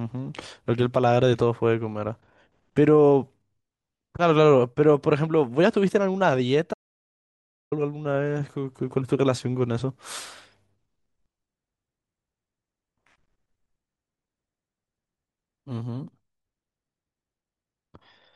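Speech with an audio dropout to silence from 6.74 to 7.72 s, losing about 0.98 s outright. The sound cuts off mid-flow into silence with no room tone, unlike a natural pause or gate, likely from a briefly lost input.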